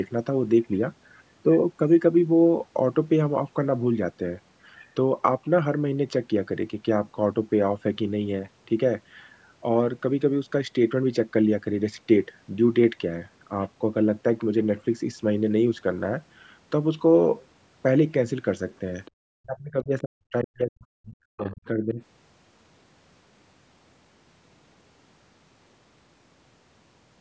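At 19.05 to 19.11 s, and again at 21.45 to 21.54 s, brief scraps of the other side's voice leak through, very faint, roughly 30 dB and 25 dB below the talker. The likely cause is residual loudspeaker echo that the echo canceller failed to remove. Unlike a background talker in the room, these fragments are short.

From 19.4 to 22.01 s, the talker's speech is suppressed in double talk, dropping by as much as about 40 dB across roughly two seconds in total. The echo canceller likely confused the talker with the overlapping far-end echo and attenuated both. Unlike a network dropout, the loss coincides with the far side playing on the loudspeaker.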